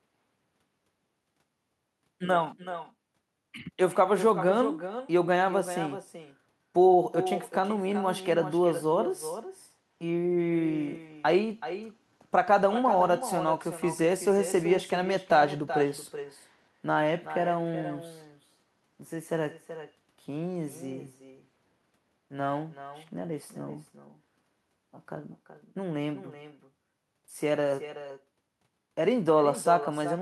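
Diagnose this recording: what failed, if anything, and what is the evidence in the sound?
Throughout the recording, every phrase is trailed by a second, fainter copy of itself arriving roughly four tenths of a second later, about 11 dB below the direct speech and sounding thinner. This is echo with no canceller, a call-processing failure: the far end is playing the call over a loudspeaker, its microphone captures that playback, and no echo canceller strips it out, so the speech returns after the network round trip.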